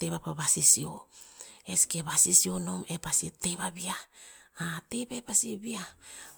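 Throughout, swirly, hollow smearing and blurred attacks despite bandwidth reaching 20.1 kHz mark generation loss, likely about three successive MP3 encodes rather than one low-bitrate pass.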